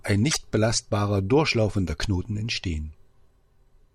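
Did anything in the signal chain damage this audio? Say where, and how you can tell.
Yes. At the codec stage, from 0.30 to 0.37 s, the speech jumps ahead across a span lasting a few frames of about 24 ms. This is likely a broken MP3 bit reservoir: frames were dropped, so following frames decoded from another frame's borrowed bytes.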